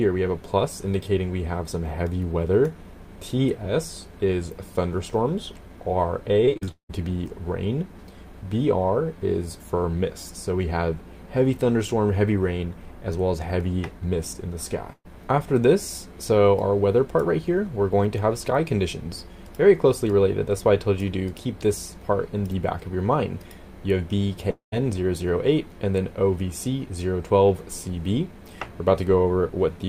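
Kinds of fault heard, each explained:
Repeated packet loss (robotic sound): packets kept going missing from 6.45 to 6.91 s, five gaps in under half a second, the longest 177 ms. The receiver papered over each by stretching the last sound, so about 61% of that span is patched, giving a choppy, mechanical texture with pieces missing.
Electrical switching spike: a sharp snap at 13.60 s, lasting only a few milliseconds and sitting on top of the audio. It is most likely a nearby switch or discharge arcing into the line, picked up by the audio line.
Burst of packet loss: a run of lost packets from 14.93 to 15.07 s left a hole of about 120 ms. The receiver extended the preceding sound and faded it down, leaving about 40 ms near silence, then the audio resumes with that piece gone.
Long network dropout: audio likely stopped arriving around 24.51 to 24.74 s, losing about 220 ms. The last sound is carried forward as a fading buzz or hiss, then about 120 ms of near silence, before the audio returns further along without the missing part.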